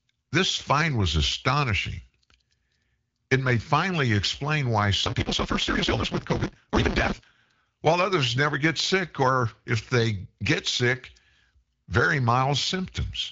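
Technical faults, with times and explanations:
5.03 to 7.62 s, block size mismatch (truncated): just after "may finally explain why", the speech rushes ahead at about 1.88 times its normal rate while keeping roughly its normal pitch, with a steady 172 Hz buzz over it until "while others never get". One stage writes longer blocks than the next reads, which fits a 256-sample read, so the end of each block is dropped. The regular seams make the buzz, and the missing audio makes the hurry.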